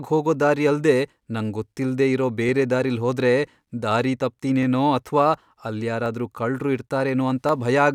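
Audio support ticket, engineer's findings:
Regular clicks through the speech. About ten events, 0.34 s to 7.49 s, one every 0.71 s. Spacing is steady and independent of the speech. Likely cause: clock drift buffer slips between two devices on independent clocks. Rate mismatch of roughly 500 ppm. The buffer fills or drains until a small block of samples, around 15, is dropped or repeated. Each slip leaves a short discontinuity in the waveform, heard as a click.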